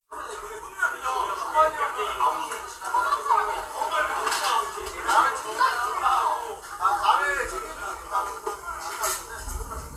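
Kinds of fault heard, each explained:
No faults detected; the audio shows no audible technical defects.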